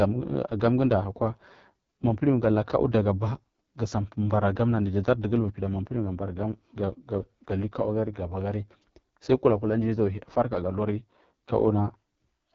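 From start to finish the speech carries the damage of an AMR wideband (HD Voice) codec running at a very low rate; the heavy roughness points to its lowest mode, around 6.6 kbit/s. The codec rebuilds the voice from a pulse-excited vocal tract model with too few bits, so the result sounds raspy and grainy. Content stops at about 7.3 kHz, and the top band holds only synthetic noise in place of real detail.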